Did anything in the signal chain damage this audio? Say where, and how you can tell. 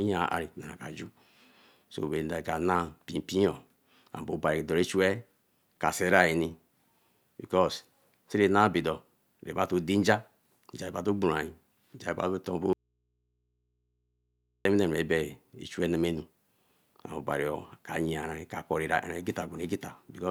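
Yes. An audio dropout to a faint residue runs from 12.73 to 14.65 s. The speech cuts abruptly for about 1.9 s, leaving only mains hum roughly 50 dB down. The path stayed live, likely from an intermittent analogue connection briefly leaving the input open.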